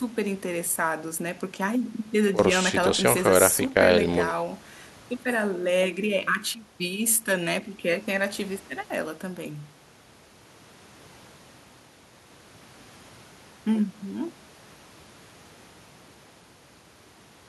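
A speech recording with no technical faults to point to. Nothing in the audio calls for a time or a cause.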